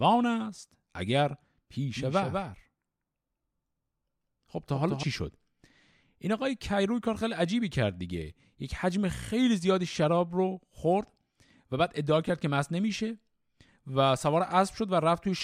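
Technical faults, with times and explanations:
1.95–5.03 s, doubled audio track: the speech is heard twice, with a second full-band copy trailing by around 200 ms and sitting roughly 5 dB below the original. The copy carries no decay tail or room colour, and it switches on and off abruptly at the edges of this span, which sets it apart from room echo or reverb, where repeats fade and take on the space's tone. A second, slower capture path or misaligned edit is the likely source.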